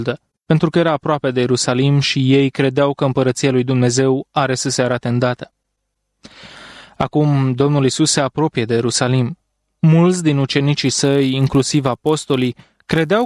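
From 10.8 s to the end, a resampler restarted on every block converts 48 kHz to 24 kHz in 10 ms pieces, leaving an edge error each time. The result is a 100 Hz buzz that, unlike mains hum, vanishes whenever the signal does.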